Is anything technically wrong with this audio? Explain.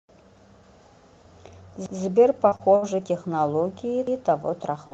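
Yes. At 1.86 to 1.99 s and again at 4.07 to 4.21 s the speech stutters as about 132 ms plays twice. This is overlapping chunks: each roughly 2 s chunk starts before the previous one ends, so the join repeats audio.

From 2.15 to 2.85 s the speech turns choppy. This is repeated packet loss: four gaps, the longest 64 ms, were patched by extending the last sound, covering about a fifth of that stretch.

From 4.87 to 4.94 s, at the very end, there is a brief smear. This is a short concealed packet loss: roughly 40 ms went missing and was filled by continuing the preceding sound.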